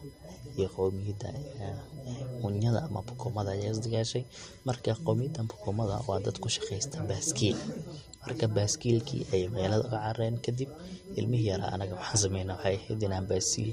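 Throughout the speech runs a USB whine, a fixed-pitch tone on a 1 kHz fundamental, loudest at its 5 kHz harmonic, about 30 dB below the speech. The bus's 1 ms frame current leaks through power or ground. Its kHz spacing, unlike 50 or 60 Hz mains hum, identifies it.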